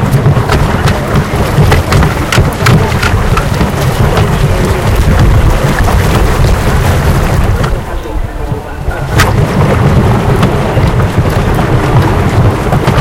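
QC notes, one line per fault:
Throughout: hard clipping. The signal was driven about 18 dB past what the chain could pass, so peaks are sliced flat, roughly 7 percent of the audio. Those flat tops add high harmonics. Every loud sound turns into harsh fuzz.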